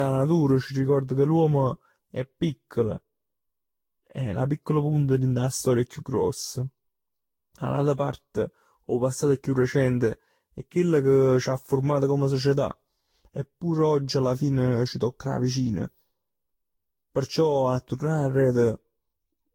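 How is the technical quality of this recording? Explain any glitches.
Quality's noticeably degraded from start to finish. The whole speech clip suffers generation loss, likely from being re-encoded around ten times, consistent with a Vorbis-style codec near 60 kbit/s. Each pass re-quantises on a shifted frame grid, so you hear swirly, hollow smearing, blurred consonant attacks, and nothing above 16.6 kHz.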